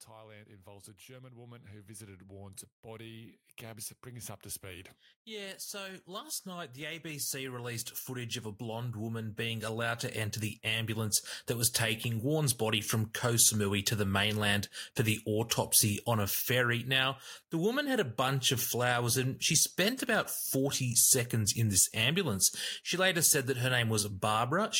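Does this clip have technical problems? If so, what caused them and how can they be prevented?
Yes. Automatic gain rising runs from 0.1 s to 12.53 s, ending just before "body from". The automatic gain control judged the incoming level too low and kept pushing its gain upward, by about 24 dB in total, so the voice and the room noise beneath it swell together over those twelve seconds rather than the speech alone getting louder. To prevent it, set a fixed input gain and disable automatic gain control before recording.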